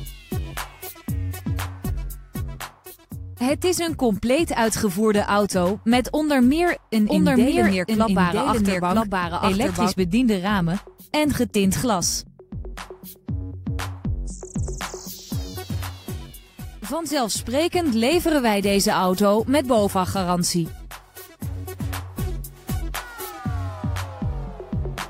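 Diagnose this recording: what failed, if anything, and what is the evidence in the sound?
From 7.06 s to 9.92 s the sound is joined by a second copy of itself, running about a second behind and roughly as loud as the original. The copy is full-band, with no decay or room colour, and it cuts in and out abruptly at those edges, so this is a doubled audio track rather than an acoustic echo. The fault is likely in the driver or buffer routing, where a slower second capture path mixed the same signal back in late.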